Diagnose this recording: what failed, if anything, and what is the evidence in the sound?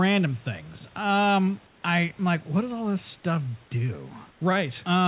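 Two short gaps in the call path, 1.67 to 1.82 s just before "I am like what" and 4.31 to 4.40 s, where the room background turns into flat, featureless hiss about 3 dB and 2 dB quieter. That's comfort noise in place of the background, likely from discontinuous transmission halting packets during pauses.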